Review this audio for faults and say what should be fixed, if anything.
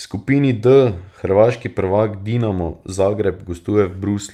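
No faults turn up in this audio, so nothing needs to be fixed.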